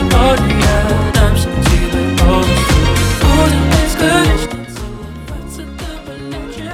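From 4.27 to 4.64 s, zipper noise: the level drops by about 15 dB in coarse 4 dB steps, roughly ten a second, with no smoothing. Each jump leaves a small click, so a ticking rides on the fade.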